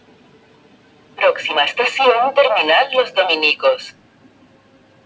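A noise suppressor built for speech stays on through the whole clip. It treats steady parts of the sound as noise. Its gain swings by around 20 dB, so held parts sink and tails thin out while sharp onsets get through. The sound pumps and flutters.

The suppressor cuts the sound hardest from 0.00 to 1.18 s, for about a second in total. The level drops by up to about 8 dB. It happens again from 3.92 to 5.05 s, with a similar drop of about 8 dB. Decays are cut short there.

The top of the band stops at 8 kHz throughout, which fits a G.722 call path at 64 kbps.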